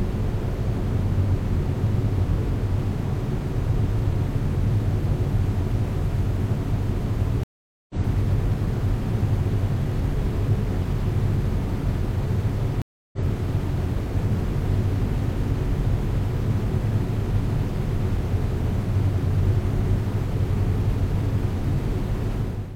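Stream reconnects occur at 7.43 to 7.95 s and at 12.82 to 13.19 s. Each time the connection dropped and the player fell silent, for 0.46 s and then 0.31 s. It then reconnected and started a fresh decoder partway through the stream. The sounds fade back in at a later point than where they stopped, skipping roughly 0.4 s the first time and roughly 0.2 s the second.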